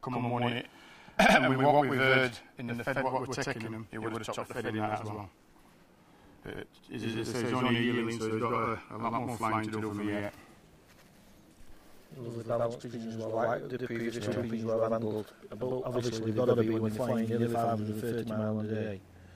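Every event in the audio is followed by a second copy of itself at the same level about 93 ms later, for the whole clip. This is channel delay (doubling). One channel runs late, which fits a 4096-sample buffer, and the two channels are then summed to mono. Unlike room echo, the repeat does not decay or blur. Unlike a short inter-channel offset, it is too long to merge into comb-filter coloration, so it is heard as a distinct slap.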